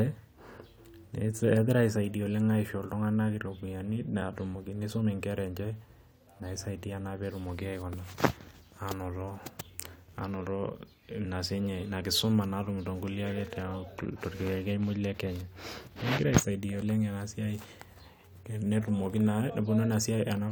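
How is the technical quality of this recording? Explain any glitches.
Nothing stood out as a technical problem on listening to this recording.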